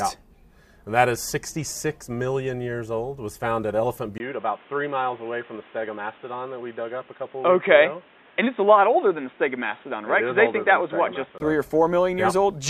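At 4.18 s the recording likely switched to a poorer input device: a 20 ms gap, then the sound turns dull and boxy, with nothing above 3.8 kHz and a new noise floor about 30 dB down at a similar level, before clearing again at 11.40 s.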